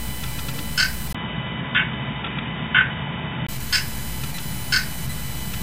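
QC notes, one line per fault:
1.13 to 3.49 s, input switched to a poorer device: after a 20 ms gap the sound turns dull and boxy, with nothing above 3.8 kHz and a faint new hiss at an unchanged level, then clears at 3.49 s, likely from a narrower-band microphone taking over.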